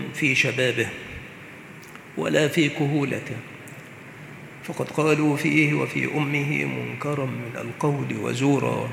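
Listening through the whole recording, nothing stood out as a technical problem at any point.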